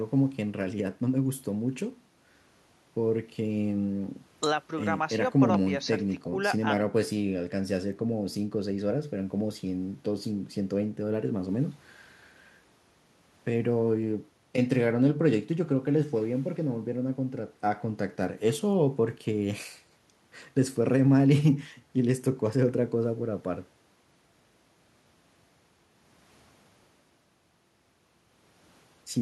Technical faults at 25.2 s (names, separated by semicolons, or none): none